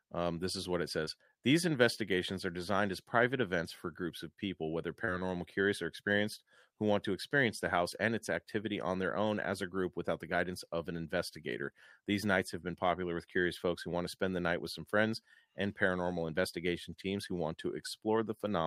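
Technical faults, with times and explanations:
1.05–1.09 s and 5.05–5.09 s, short concealed packet loss: roughly 20 ms of audio after "this is what it", and between "groups of people whether" and "curious or experienced who", arrived too late. The decoder extrapolated about 14 ms and 24 ms from the preceding sound, then crossfaded back, leaving a brief smeared wobble.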